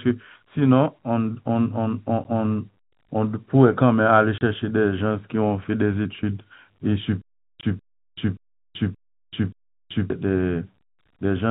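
At 2.24 s a brief hole of about 10 ms opens in the speech, which fits one lost packet filled with silence. At 4.38–4.41 s a 30 ms gap follows, and another at 7.61–7.63 s lasts 20 ms. Each has hard edges and a length that is a multiple of 10 ms. Unlike the stutter, nothing is replayed; the sound simply drops out.

From 7.22 to 10.10 s the audio stutters with silent gaps. The same 196 ms fragment plays five times, each followed by about 381 ms of digital silence, so it repeats every 577 ms. This was likely a stalled stream retrying. Unlike packet loss, the repeated burst and the steady rhythm give it away, and the audio that should have filled that stretch is lost. Through all of this the band-limited G.711 telephone sound, with nothing above 4 kHz, carries on.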